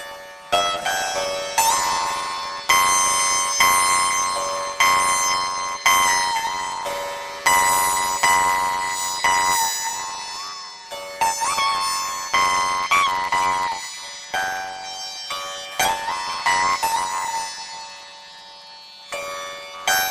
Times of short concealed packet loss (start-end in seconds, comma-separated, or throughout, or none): none